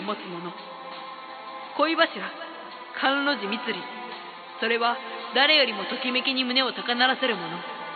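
No technical faults are audible anywhere in the audio.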